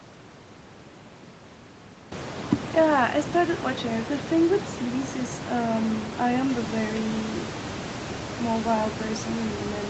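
Nothing stood out on listening to this speech clip, which comes through a call path with a bandwidth that points to content up to about 8 kHz and room noise that rises around 2 s to sit roughly 11 dB below the speech.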